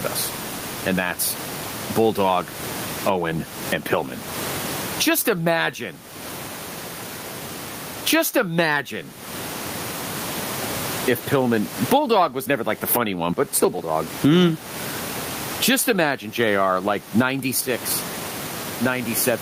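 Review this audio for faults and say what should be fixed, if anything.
There's gain pumping all the way through. The gain swings around 25 dB, likely because the input gain is too hot and a fast limiter keeps clamping it. The room noise sits about 33 dB below the speech. Set the mic gain lower so the limiter rarely has to act.

There are also sudden gain jumps, where speech and background shift level together with no ramp: up about 12 dB from 3.09 to 4.54 s, up about 14 dB from 12.94 to 13.33 s, and down about 12 dB from 17.61 s to the end. That's likely a digital gain setting being applied instantly. Apply gain changes with a short ramp rather than from one sample to the next.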